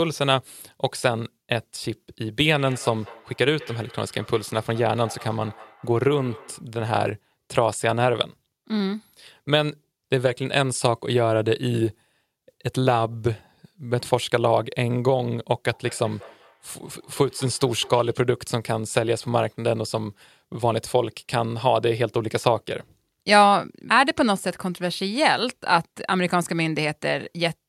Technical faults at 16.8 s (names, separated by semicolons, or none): feedback echo between two devices